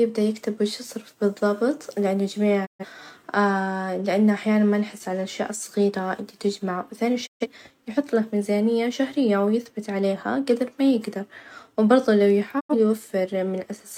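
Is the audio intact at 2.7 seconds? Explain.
No. From 2.65 to 2.85 s there is a digital broadcast dropout: the receiver stopped getting valid frames and muted, so the sound fades to silence within 20 ms and returns later with material skipped. Clean silence rather than static marks it as digital, not analogue fading.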